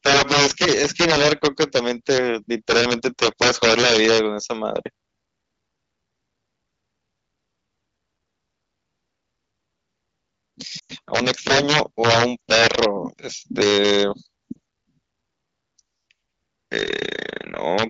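From 0.06 to 2.18 s and again from 2.70 to 4.18 s, the speech is pushed about 9 and 8 dB past full scale, and integer overflow sets in. Rather than clipping, each loud peak wraps to the opposite sign, producing harsh cracks. On the waveform, peaks leap from one rail to the other. On a spectrogram, they appear as vertical broadband streaks.

At 10.79 to 10.93 s, a 100 ms stretch of lost AMR speech frames occurs. The decoder repeats its last good settings at falling gain, so the sound drops to near silence within two frames. It shows as smeared, flattening harmonics and a sinking envelope.

Overflow returns from 11.16 to 12.85 s at about 9 dB over full scale. Within it, a single lost frame at 12.39 s causes a brief dip.

Milder overflow follows from 13.61 to 14.02 s, about 2 dB over. A 40 ms concealment gap at 14.52 to 14.58 s comes next.

A final overflow crack occurs at 17.79 to 17.83 s.

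Throughout, the wideband AMR coding adds only light texture.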